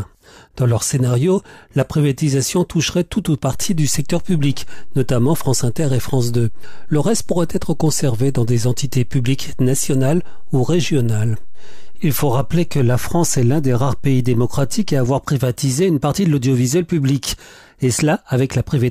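A low thump at 3.53 s and another at 15.06 s mark a DC step: the waveform's zero line jumps by an offset of about -20 dBFS, holds there, then returns, as when an offset input is switched in. The audio between continues unchanged.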